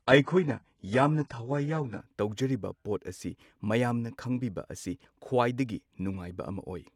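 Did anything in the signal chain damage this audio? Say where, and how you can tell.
Yes, at the codec stage, in delivery. This is an adaptive stream starting at a low bitrate. For the first 2 seconds, 0.0 to 2.0 s, the speech has nothing above 11.1 kHz, the top end sounds synthetic, and the codec artefacts are stronger. That points to something like a 12 kbit/s HE-AAC rendition. Then, right before "ꯇꯧꯖꯔꯤꯕ ꯄꯣꯠ ꯑꯁꯤ", quality jumps with no gap, as the player switches to a much better version, around 96 kbit/s AAC-LC.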